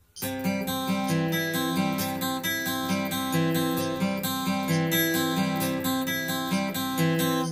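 Channel delay (comb filtering) runs throughout: one channel lags the other by roughly 10 ms, so summing them cancels evenly spaced frequencies from near 40 Hz upward. The sound is hollow and phasey, and a spectrogram shows fixed, regularly spaced dark horizontal notch bands.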